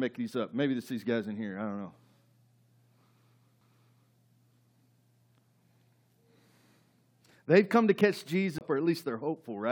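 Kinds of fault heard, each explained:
CD skip: a knock or a flaw made the laser jump onto a different turn of the disc's spiral, so playback briefly mutes, ticks and resumes elsewhere in the speech. A very short mute at 3.61 s, then a longer gap of roughly 30 ms at 8.58 s, shows as vertical broadband ticks and a notched waveform break.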